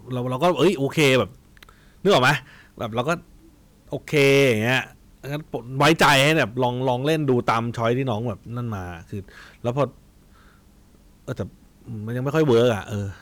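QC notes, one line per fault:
0.43–1.21, 2.06–2.34, 4.14–4.79, 5.80–7.92, 9.68–9.84 and 12.35–12.72 s: hard clipping. The speech overdrove a stage by about 3 to 16 dB, cutting its peaks flat. The high harmonics this adds give crackle and fuzz, harshest at 5.80–7.92 s (about 16 dB) and mildest at 9.68–9.84 s (about 3 dB).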